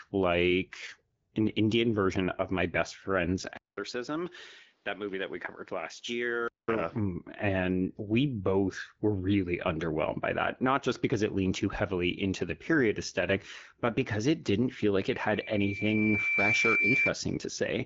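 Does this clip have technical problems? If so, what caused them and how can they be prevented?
Yes. An input switched to a poorer device from 3.57 to 6.68 s: after a 200 ms gap the sound turns dull, nothing above 6.4 kHz, around 5 dB quieter, with new faint background noise. This is likely a change to another microphone or headset profile. Prevent it by locking the input device for the whole session.

A loudspeaker feedback squeal from 15.13 to 17.15 s: the microphone picks up its own loudspeaker, and a 2.3 kHz tone builds over roughly a second and a half until it sits about 5 dB above the speech. Prevent it with headphones or by lowering the speaker gain.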